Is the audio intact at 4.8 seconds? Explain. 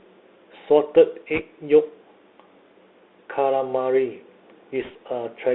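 No, not quite. Around 4.82 to 4.91 s there's a short burst of bit errors on a Bluetooth voice link: flipped bits in the CVSD stream nudge the one-bit up/down steps the wrong way, at a rate of roughly one percent. Each bit carries only a tiny step, and the decoder's adaptation lets the damage fade quickly. So instead of loud clicks you hear a brief rushing, crackly texture laid over the speech for about a tenth of a second.

Underneath that, the whole clip carries the Bluetooth CVSD headset codec, which plainly shapes the sound at 4.8 s too. The audio sits in a telephone-style band of roughly 300 Hz to 3.7 kHz, which fits a 64 kbps CVSD link. Because the codec tracks the waveform with an adaptive one-bit step, sharp high-frequency energy outruns it. Sibilants come out scratchy, and a fine granular hiss rides under the speech.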